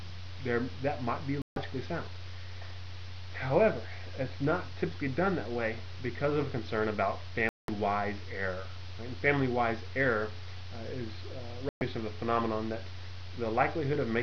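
The audio suffers from digital broadcast dropout, with three muted holes at 1.42–1.57 s, 7.49–7.69 s and 11.69–11.82 s, losing 144, 192 and 120 ms. The receiver stopped decoding when frames went missing or failed checks, and the gap lengths fit blocks of roughly 24 ms frames. Unlike tape dropout, the level falls to silence rather than dipping and dulling, and nothing is patched in, so the missing sound is simply gone.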